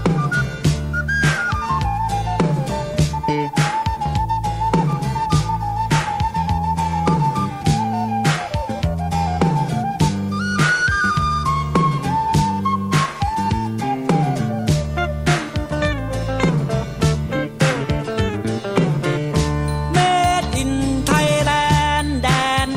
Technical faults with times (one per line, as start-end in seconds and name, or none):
0.00-22.76 low bit depth without dither